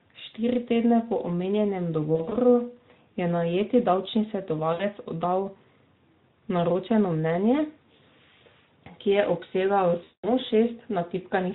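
Speech, carried over a lightly coded Speex link, suffers VoIP packet loss concealed by the speech codec at 2.15–2.38 s after "po omenjenem", 4.73–4.85 s after "je najeti davčni", and 10.03–10.32 s. Each gap becomes a fading, stretched smear of tone or coloured noise, seen as stretched spectral content and a shrinking waveform envelope.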